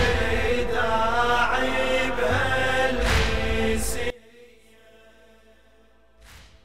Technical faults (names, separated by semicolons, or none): one channel inverted